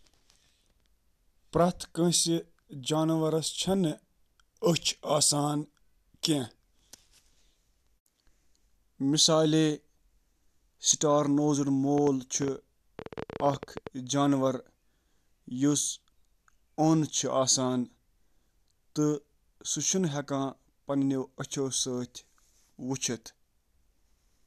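From 11.98 s to 13.88 s a rapid ticking rides over the speech, about 11 clicks per second at an uneven pace, some twenty in all. The clicks are alike in shape and stand out well above the speech, around 10 dB louder, so they cut through the gaps as well. This train of clicks is likely interference from nearby equipment or a faulty connection or power supply.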